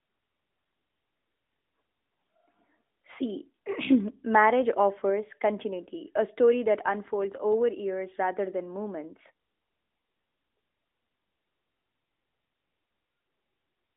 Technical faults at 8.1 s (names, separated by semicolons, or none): none